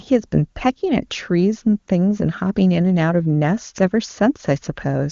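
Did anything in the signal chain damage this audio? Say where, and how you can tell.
No, nothing in the signal chain damaged this audio.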